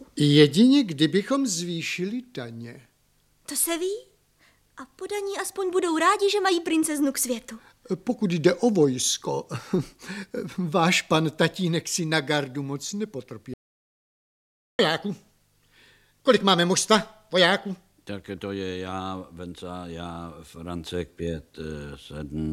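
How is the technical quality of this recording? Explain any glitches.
There is one glitch, an audio dropout to silence from 13.54 to 14.79 s, lasting about 1.25 s. The sound cuts off abruptly mid-flow and the gap is dead digital silence, with no room tone or background noise underneath, before the audio resumes just as suddenly. That total absence points to the input signal being lost while the recorder kept writing zeros, likely from a momentary disconnection or mute, so whatever occurred during that stretch is gone.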